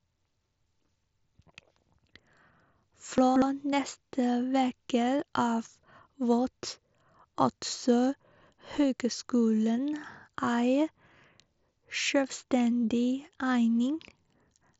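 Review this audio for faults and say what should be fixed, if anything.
Chunks out of order from 3.18 to 3.42 s, just before "neste veke av": one 60 ms chunk plays three chunks late, after the ones that should follow it. Nothing is lost, but the span sounds jumbled, with three hard joins. This points to a buffer or write queue releasing blocks out of sequence. To prevent it, tag each chunk with a sequence number and reorder by that number before playback or writing.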